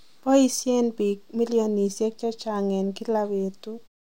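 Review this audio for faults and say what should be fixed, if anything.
Nothing in the speech needs fixing, and the only level change is a smooth, editor-style fade-out at the end of the clip, with no click or hard edge.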